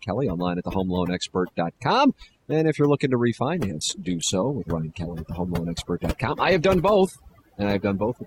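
Overdone noise removal runs through the whole speech clip: the suppressor pulls individual frequency bands down wherever they sit near its noise estimate, taking quiet parts of the voice with them, so the background drops and breaks up into twinkling specks. At 3.56 s, right after "if you're looking to", the adaptive stream drops to a lower bitrate, stepping from Opus at 64 kbit/s to 16 kbit/s until the end. Codec artefacts rise abruptly with no gap.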